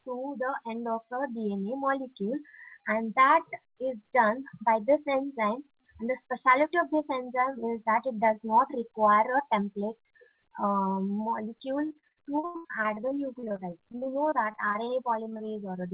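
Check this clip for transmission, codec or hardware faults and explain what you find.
Two transmission faults are audible, both in the last four seconds, carried over a call path whose band stops at 4 kHz, which fits G.711 A-law.

Repeated packet loss (robotic sound) runs from 11.86 to 15.49 s. Thirty-seven separate holes, the longest 91 ms, were each patched by extending the preceding audio, so about a quarter of that stretch is filler. The sound turns choppy, with pieces dropping out.

Short concealed packet loss follows at 15.89 to 15.91 s. About 20 ms never arrived in time, and the receiver bridged the gap by continuing the last sound before blending back into the real signal. It comes across as a brief smear or wobble.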